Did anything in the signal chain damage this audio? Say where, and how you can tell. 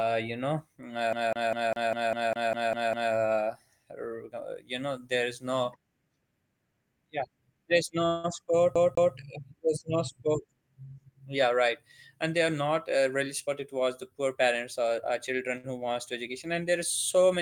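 Yes. The first fault sits in playback from a damaged disc, a CD stuck on one turn. Right after "you know", from 1.13 to 3.13 s, the same 200 ms slice of audio repeats ten times in a rapid, even stutter, with a tiny mute at each jump. It happens again from 8.75 to 9.15 s, two repeats, just before "there's no sport". A scratch keeps knocking the laser back one track, so the disc's rotation sets the fixed loop length.

There is a call audio freeze from 8.06 to 8.26 s, after "yeah there's" and before "sport there's no sport". The last sound is drawn out as a decaying buzz or hiss for about 179 ms, and the audio then picks up exactly where it stopped, with nothing skipped. The likely cause is on the network side: packets were held up, the receiver's jitter buffer emptied, and it synthesised a continuation, which added 179 ms of delay.

A jitter buffer speed-up runs from 13.47 to 15.57 s. The audio sounds hurried, playing at 107% of normal speed, but its pitch stays unchanged. 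Once the buffer had collected more audio than its target, the receiver cut it back by trimming many tiny pitch-period-sized pieces in succession, roughly 150 ms in total. Because the cuts follow the waveform's own period, the tempo rises while the pitch holds steady.

A short stall from a late packet follows right after, from 15.57 to 15.66 s. One sound is held 63 ms too long, with a faint buzz or dip, and then the audio carries on with nothing lost. A single packet arrived after its playout time, so the jitter buffer stretched the last sound to bridge the wait, pushing the timing back by those 63 ms.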